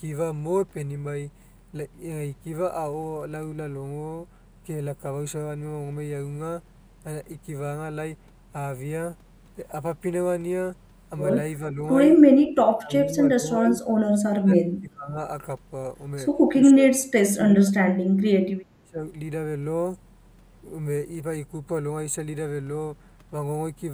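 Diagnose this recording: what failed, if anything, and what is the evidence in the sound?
The speech sounds thin and hollow throughout, with a notch near 5 kHz: channel delay (comb filtering). One channel lags about 0.1 ms, a few samples, before mono summing.

The speech dips or drops out at 11.67–11.81, 12.5–13.73, 14.32–15.19, 16.57–17.73 and 18.82–19.04 s, by up to about 30 dB. This is likely speech suppressed in double talk by the call's echo canceller.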